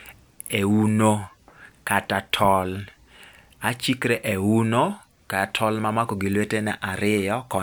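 No technical faults are audible.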